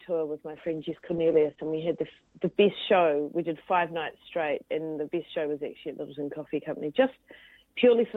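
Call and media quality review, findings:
Call bitrate drop, 0.53–2.61 s: sound turns rough and muffled, top end cut from 20 kHz to 8 kHz for about 2 s. Encoder starved after a bandwidth-estimate fall, which fits roughly 32 dropping to 10 kbps. Continuous coarseness without gaps distinguishes it from packet loss.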